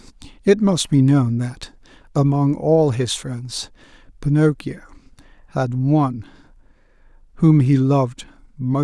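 Nothing in the speech caught the ear as a technical problem on listening.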